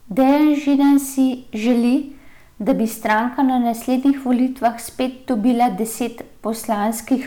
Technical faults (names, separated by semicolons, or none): hard clipping